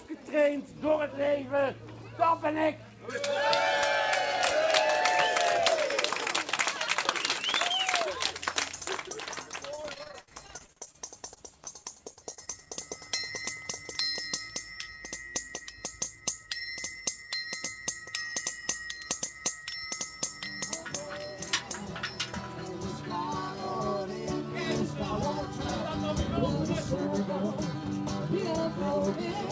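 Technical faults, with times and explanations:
3.10–8.90 s: pre-emphasis left on. The treble is lifted by about 13 dB at 10 kHz relative to 1 kHz, following a rising slope that fits the 75 µs FM curve. A flat treble-shelf boost would instead level off. The sound turns thin, bright and hissy.
9.76–10.96 s and 11.34–12.73 s: repeated packet loss (robotic sound). Short holes, up to 60 ms and then up to 28 ms, are bridged by repeating the last sound, which covers about 30% and then 12% of each span. The constant stitching gives a choppy texture, not one clean dropout. The sound also stops at 8 kHz, as expected on the G.722 call path.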